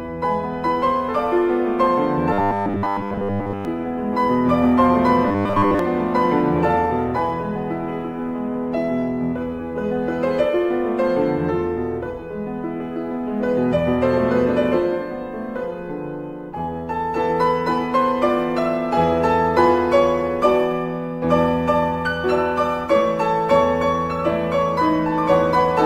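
Fresh audio likely arrived too seldom, so short 10 ms buffers were replayed while most of the real signal was dropped. That robotic sound from repeated short buffers appears from 2.33 to 3.65 s and 5.28 to 5.79 s as a rigid, metallic 100 Hz buzz.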